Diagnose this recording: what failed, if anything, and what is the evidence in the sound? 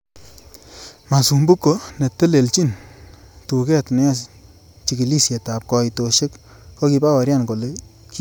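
Nothing in this recording points to a failure at any stage of the chain. There are no events in the sound to tie to a time or a mechanism.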